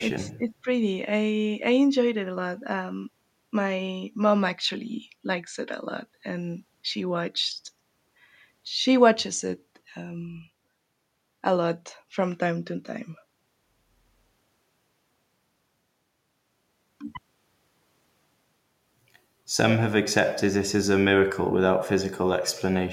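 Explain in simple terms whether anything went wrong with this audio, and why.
Right at the start, from about 0.27 to 0.68 seconds, the speech dips for roughly a third of a second. That's speech suppressed in double talk, likely an echo canceller turning everything down when both ends talked at once.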